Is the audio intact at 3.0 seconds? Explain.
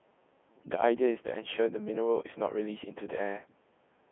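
No. Codec 2 vocoder damage runs through the whole clip, including 3.0 s. The speech is rebuilt from sine waves, which fits a 3.2 kbit/s mode. It sounds robotic and buzzy, with nothing above 3.8 kHz.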